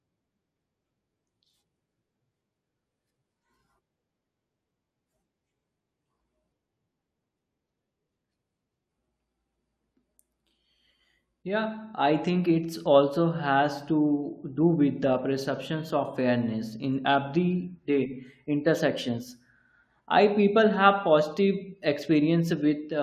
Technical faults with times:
none

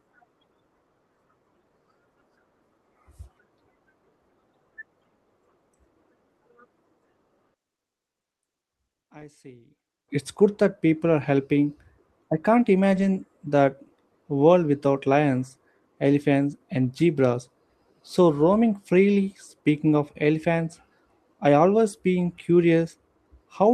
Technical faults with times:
7.54-10.08 one channel inverted
9.19-9.23 short concealed packet loss
9.21 lost packet rebuilt from error correction
12.91-13.05 lost packet rebuilt from error correction

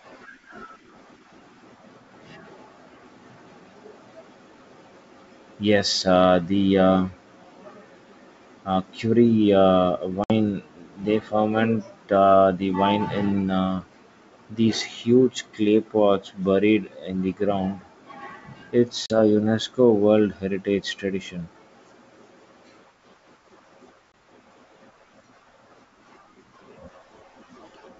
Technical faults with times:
10.24-10.32 packet loss on an ADPCM call
19.06-19.19 packet loss on an ADPCM call
24.12-24.14 packet loss on an ADPCM call

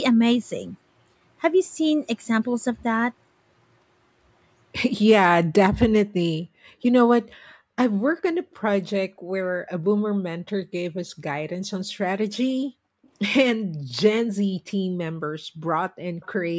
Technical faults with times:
6.45-7.76 background gated by the echo canceller
9.16-16.02 background gated by the echo canceller
13.03-13.09 echo leak
16.20-16.27 echo leak

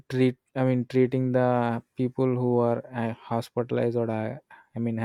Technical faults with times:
none

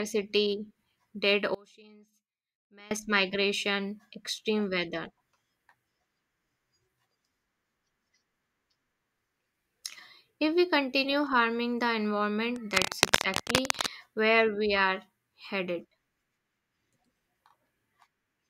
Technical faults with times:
1.55-2.91 one channel inverted
12.56-13.91 cable scratch noise

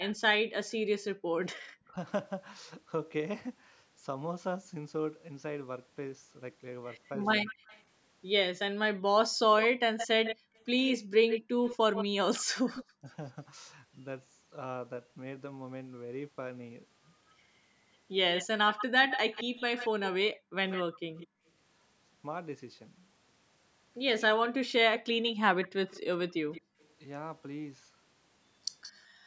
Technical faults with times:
0.00-0.14 echo leak
1.14-1.33 background gated by the echo canceller
1.79-1.96 speech suppressed in double talk
7.06-12.84 echo leak
7.41-7.59 speech suppressed in double talk
10.36-12.55 background gated by the echo canceller
13.01-13.07 speech suppressed in double talk
18.34-29.05 echo leak
20.35-21.46 background gated by the echo canceller
26.61-29.19 background gated by the echo canceller

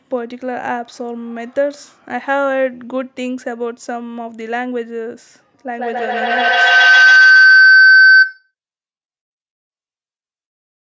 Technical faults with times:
5.74-8.53 feedback howl

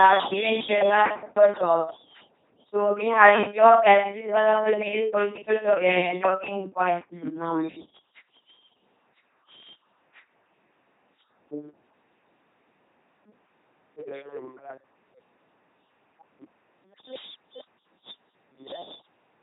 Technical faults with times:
0.00-19.42 LPC-10 vocoder

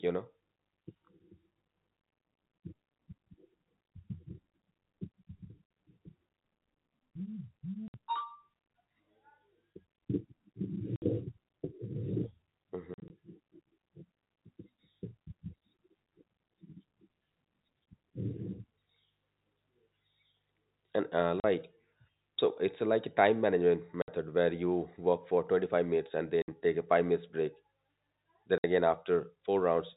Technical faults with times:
7.88-7.94 packet loss filled with silence
10.96-11.02 packet loss filled with silence
12.94-13.10 packet loss filled with silence
21.40-21.44 packet loss filled with silence
24.02-24.08 packet loss filled with silence
26.42-26.48 packet loss filled with silence
28.58-28.64 packet loss filled with silence

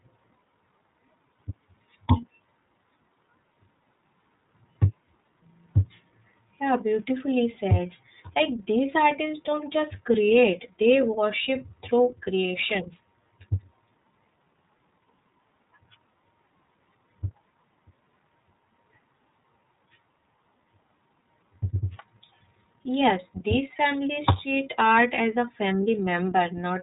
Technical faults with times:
0.00-26.82 iLBC codec

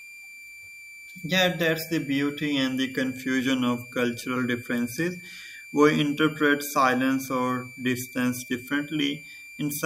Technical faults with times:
0.00-9.86 switching supply whistle

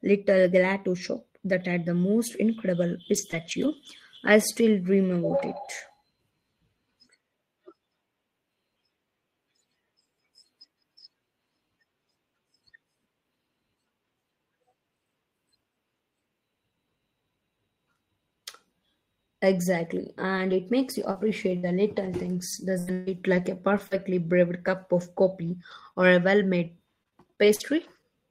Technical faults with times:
3.13-3.87 lost packet rebuilt from error correction
3.31-3.34 short concealed packet loss
4.15-4.29 lost packet rebuilt from error correction
20.37-28.04 scattered short gaps

